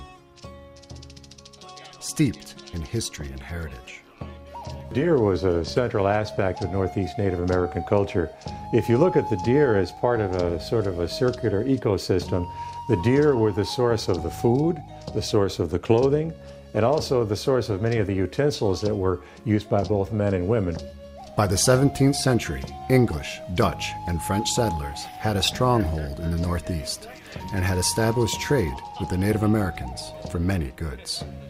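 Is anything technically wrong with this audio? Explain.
No, nothing technically wrong can be heard here.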